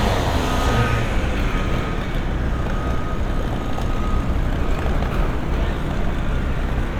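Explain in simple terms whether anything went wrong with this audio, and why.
Listening to these sounds, nothing stood out as having gone wrong.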